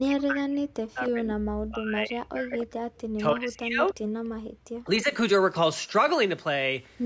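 From 0.0 to 2.84 s the speech sinks and breaks up. It drops by roughly 40 dB at its deepest. It returns, then fades again from 3.16 to 3.96 s, this time by about 35 dB. A third dip follows from 4.72 to 5.1 s, again near 40 dB. This pattern is likely speech suppressed in double talk. Both ends seem to talk at once. The echo canceller cannot tell the near voice from loudspeaker echo, so it turns everything down.

Between 3.87 and 3.92 s a faint ghost of the voice slips through. It trails the original by 295 ms. It sits roughly 30 dB below the speech, a brief scrap rather than a clear repeat. This is likely an echo leak. A far end on loudspeaker did not fully cancel what its microphone caught. The leftover went back down the line as a delayed copy.

From 4.29 to 4.44 s the room tone vanishes. It drops by about 40 dB for 150 ms, then comes back. This is background gated by the echo canceller. 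While the loudspeaker was playing, the canceller clamped the microphone hard. The room sound briefly disappears, then returns once it lets go. The audio also carries nothing above 8 kHz, which suits the call's microphone path.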